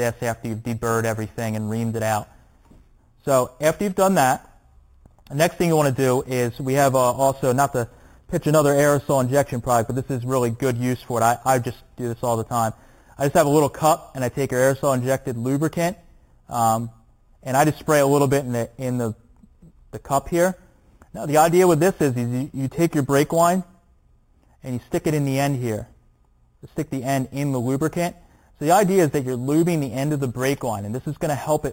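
The audio carries imaging from sample-and-hold upsampling throughout its length. A metallic fizz rides on the sound and rises and falls with it. The first mirror image sits between 4 and 8 kHz, about 17 dB below the signal. The pattern points to an 8 kHz source raised to 44.1 kHz by repeating each sample, with no smoothing filter. The copies of the spectrum above the original band were never removed. That low starting rate makes the fizz stronger.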